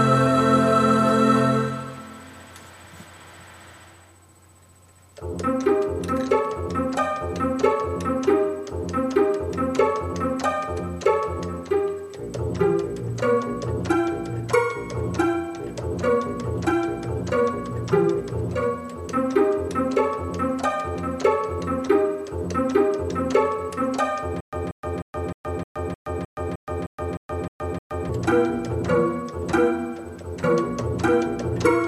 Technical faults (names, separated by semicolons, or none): stutter with silent gaps